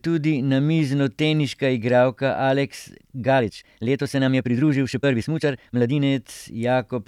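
From 3.35 to 6.03 s the speech turns rushed at unchanged pitch, a time-stretched section, likely sped up about 1.69 times by dropping short pieces.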